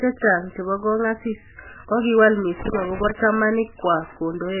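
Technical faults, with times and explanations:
Throughout, MP3 compression: the sound is watery and swirly, with heavy smearing and nothing above 3 kHz, which fits a very low bitrate of around 8 kbps. The likely cause is an encoder dropping weak frequency lines frame by frame, so the swirling sets it apart from a plain low-pass filter.
2.60 to 3.11 s, loose connector crackle: just after "chebo kongasis kokiwal", an irregular burst of crackle and scratching breaks up the signal. A worn or dirty contact making and breaking chops the audio unevenly, unlike clipping, which distorts only the loud peaks.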